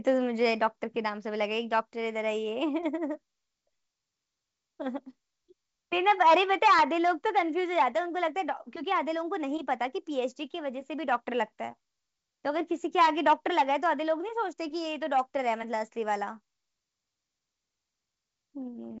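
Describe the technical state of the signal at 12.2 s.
At 12.2 s the audio is intact, with the wideband telephone coding carrying the speech cleanly at that moment.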